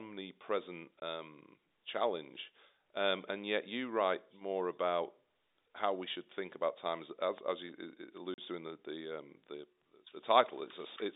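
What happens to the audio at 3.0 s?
At 3.0 s the speech is intact, carried through the G.711 telephone coding at its usual narrow line band with no fault at that moment.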